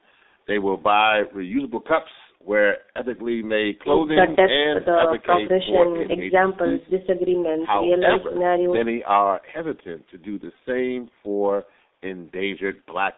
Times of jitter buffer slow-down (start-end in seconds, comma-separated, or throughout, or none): none